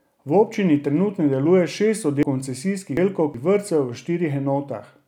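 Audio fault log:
2.23–3.34 s, chunks out of order: a 372 ms chunk of speech plays two chunks late, jumbling the passage, with three hard joins.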